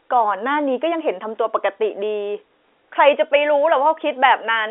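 The speech comes through a standard telephone channel whose band runs from roughly 300 Hz to 3.5 kHz with nothing above about 3.8 kHz, which fits 64 kbit/s G.711 A-law coding, and it carries no technical faults.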